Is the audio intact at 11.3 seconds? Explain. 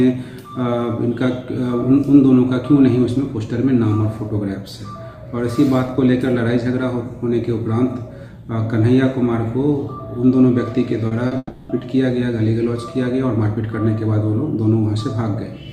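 No. From 11.27 to 11.33 s there is a brief smear where the sound is stretched rather than heard cleanly. This is short concealed packet loss: about 40 ms never arrived in time, so the receiver extended the preceding sound to bridge the hole, then blended back into the real audio.

Right after, from 11.37 to 11.71 s, the sound turns into a fading buzz or hiss for about 320 ms, then about 30 ms of silence, before the audio resumes without the lost portion. This is likely a long network dropout, with the receiver continuing the last sound until it gave out.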